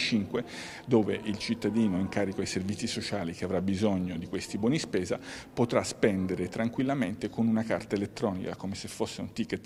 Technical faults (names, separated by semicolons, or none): none